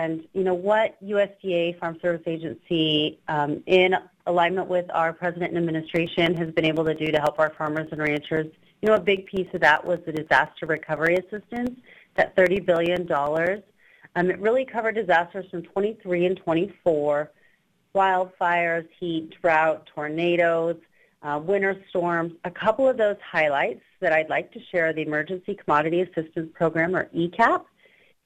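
From 5.86 to 13.67 s, periodic USB or driver dropouts cut roughly 2 ms gaps of silence every 0.1 s, giving a steady ten-per-second ticking. The waveform shows tiny flat notches at even spacing, and the spectrogram shows evenly spaced thin vertical broadband lines.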